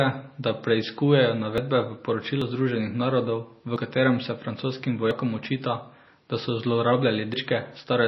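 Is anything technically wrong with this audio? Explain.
Yes. The speech has two problems.

Throughout, the sound is watery and swirly. This is likely MP3 compression at a low bitrate, around 24 kbps. Starved of bits, the encoder cuts the treble and switches weak frequency lines on and off.

There are five jumps in the speech: at 1.58 s after "da preiskujejo", at 2.42 s, at 3.76 s between "narodov v" and "katerem se francoskim", at 5.11 s before "očita da so", and at 7.34 s. Each is likely a dropped buffer (overrun). Samples were overwritten before they were read, so the audio skips ahead with no silence. The first three lose about 50 ms each, and the last two about 100 ms.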